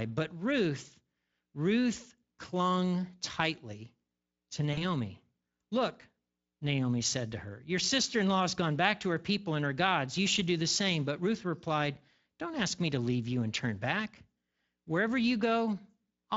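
At 4.73 to 4.83 s, after "clung tightly to", VoIP packet loss concealed by the speech codec fills a 40 ms gap with a fading stretch of the last sound, not silence or a click.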